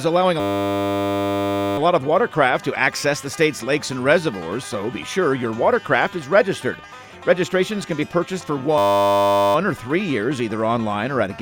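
From 0.4 to 1.78 s and again from 8.78 to 9.55 s, a system hang loop replays one 10 ms buffer, giving a steady 100 Hz buzz.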